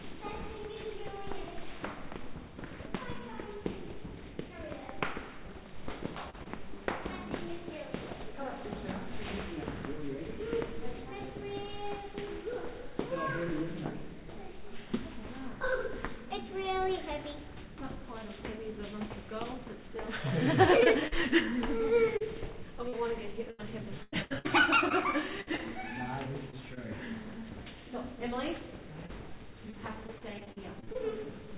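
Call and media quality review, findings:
Short concealed packet loss: brief smear/wobble at 6.30–6.35 s and 6.43–6.47 s. Jitter buffer/decoder: about 40 ms then 20 ms of packets arrived late or never, and the gaps were filled by extending the preceding sound before blending back.

Repeated packet loss (robotic sound): choppy stretches with pieces missing, 20.83–26.78 s and 29.06–30.97 s. Jitter buffer/decoder: 16 and then 10 gaps (longest 97 ms) were each patched by continuing the last sound, covering about 10–12% of each span. Audio has no content above 4 kHz, consistent with a narrowband G.711 A-law path.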